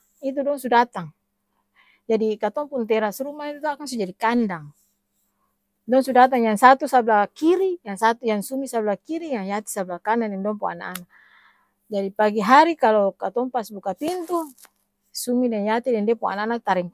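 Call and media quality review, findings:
No audible faults found in the speech recording; nothing to attribute to any component.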